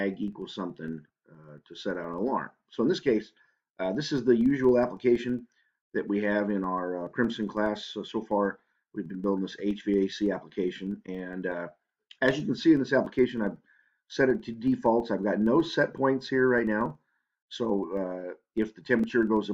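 A filter restarted on every block runs throughout the clip. The filter drops its internal state between blocks, so each block starts from silence with a small transient. These repeat as a steady buzz at about 21.5 Hz, which fits a 2048-sample block, and the buzz rises and falls with the sound's level.

An overlap between stream segments occurs at 19.04 s. Two 6.0 s segments carry overlapping time stamps, and the player trims sound that was never actually doubled. Roughly 6 ms disappears and the waveform jumps, heard as a tiny skip.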